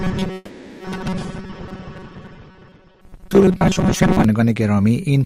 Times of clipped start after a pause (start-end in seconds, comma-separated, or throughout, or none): none